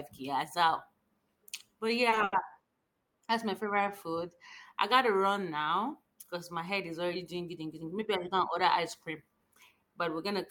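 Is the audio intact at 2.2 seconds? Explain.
No. The speech hangs with a slight buzz or dip at 2.09–2.14, 2.14–2.18 and 2.24–2.34 s: a short stall from a late packet, with the receiver stretching sound until delivery.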